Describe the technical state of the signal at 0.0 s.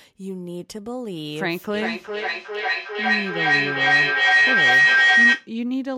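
At 0.0 s the speech signal is intact, with no audible fault at that moment.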